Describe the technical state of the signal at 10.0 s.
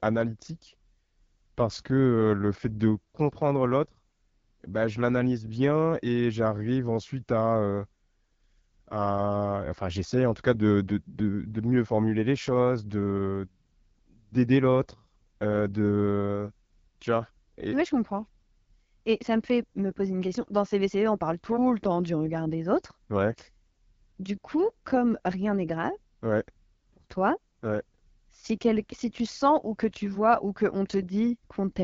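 At 10.0 s the speech sounds rough and raspy, with plainly audible coding damage and nothing above 7.5 kHz. This is the AMR wideband (HD Voice) codec, present across the whole clip. It models speech up to 6.4 kHz as pulses driving a vocal tract filter and fills the band above with shaped noise. The raspiness points to one of its lowest rates, around 8.85 kbit/s, where that model is too coarse to keep speech clean.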